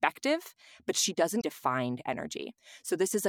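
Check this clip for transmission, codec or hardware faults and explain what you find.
One fault appears in the speech. Damaged data in a compressed stream, 1.37 to 1.44 s: corrupted frames make the decoder lose sync and hunt for the next header, leaving a brief chirp, squawk, click or short hole.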